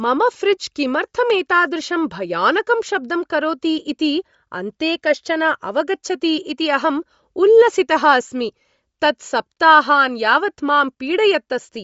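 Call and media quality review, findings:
Bluetooth LC3 compression, throughout: speech breathy and grainy, nothing above 7.7 kHz. Likely an LE Audio link at a low rate (fits 32 kbps, 10 ms frames). Upper bands are zeroed and refilled with noise, giving hissy texture rather than a plain low-pass's clean dullness.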